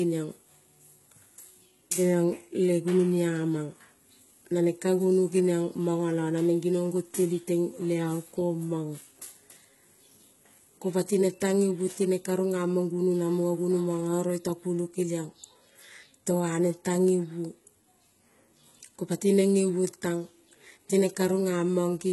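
Across the whole speech clip the treble sounds rebuilt rather than recorded. S sounds turn gritty and metallic, and nothing reaches above about 11.8 kHz. This is likely heavy HE-AAC compression, at a rate that points to around 16 kbps. Upper bands are copied from lower ones, so their harmonics clash.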